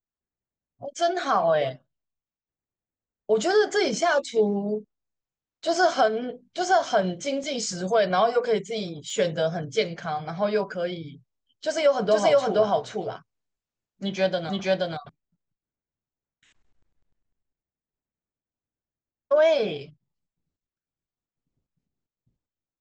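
Speech clip. Two blocks of digital silence drop out at 7.44 s and 9.10 s, lasting 2.45 ms and 2.9 ms. Each cuts to zero abruptly, giving tick-like clicks. The second fits a 128-sample buffer. From 12.11 to 15.09 s a doubled audio track appears. A dry, full-band copy trails about half a second behind, at roughly equal level, starting and stopping abruptly. A second capture path is the likely cause.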